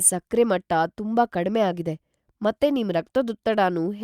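Nothing goes wrong anywhere in this bit of speech, so there's no technical fault to point out.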